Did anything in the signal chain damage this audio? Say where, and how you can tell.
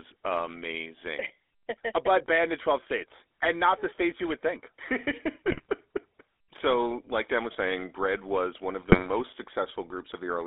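Yes. The speech is buzzy and gravelly throughout, confined to roughly 300 Hz to 3.6 kHz: a codec-stage fault, consistent with 13 kbps GSM full-rate's pulse-excited vocal-tract model.

Squawking, gargling bursts at 5.52 to 5.70 s and 8.82 to 9.10 s, the latter just after "was one", are GSM bit errors from the radio link corrupting decoder filter, pitch and gain values.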